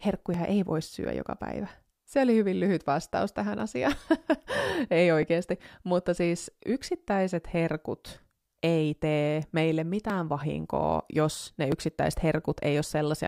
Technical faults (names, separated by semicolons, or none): clock drift buffer slips